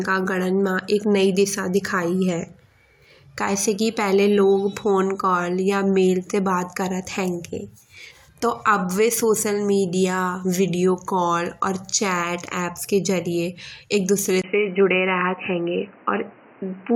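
At 14.42 s, after "के जरिये एक दुसरे", there's a 20 ms gap. Then the speech goes dull with nothing above 3 kHz and faint new noise, likely the input switched to a poorer device.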